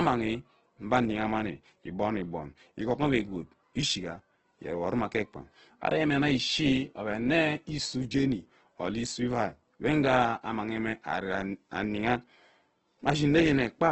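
From start to finish the speech has heavy damage that points to Opus compression, likely at a very low rate in the region of 12 kbps. Nothing is heard above about 8.2 kHz, so the band is cut to wideband and sibilants lose their air. Within that band the encoder has too few bits and fills bands with folded or noise-like energy, so vowels and voiced tones sound grainy, rough and hissy rather than clean.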